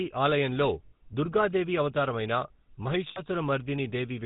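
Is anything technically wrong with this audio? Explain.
Yes. The whole clip has a buzzy, gravelly roughness with nothing above 4 kHz. That is the GSM full-rate codec: a vocal-tract model driven by sparse, regular pulses, at 13 kbps.

At 0.88 s and again from 3.08 to 3.20 s, the sound locks into a rough, metallic ring lasting 40 and 80 ms. These are lost GSM frames, replaced by repeating the last good frame.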